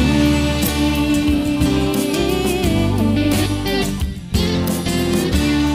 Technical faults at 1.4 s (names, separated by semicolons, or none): none